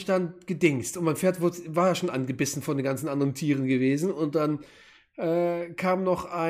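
Nothing in the audio stood out as a technical problem on listening.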